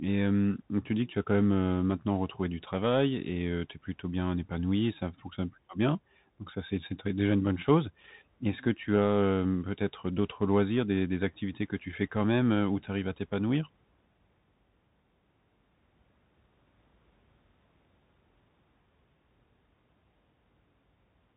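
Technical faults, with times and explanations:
Throughout, Bluetooth CVSD headset codec: nothing passes above 3.8 kHz, a flat ceiling on a spectrogram. One-bit up/down coding, which fits a 64 kbps link, lags fast loud changes, so s sounds turn scratchy and a granular hiss fills gaps, visible as grainy noise.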